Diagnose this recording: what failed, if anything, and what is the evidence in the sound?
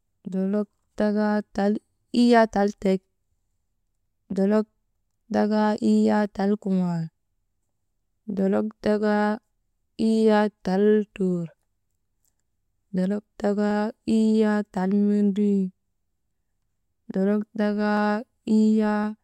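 A regular click runs through the speech every 1.07 s, from 0.93 s to 19.04 s, around twenty in all. That's likely clock drift buffer slips at the buffer stage: two clocks about 150 ppm apart, so a few samples get dropped or repeated each time.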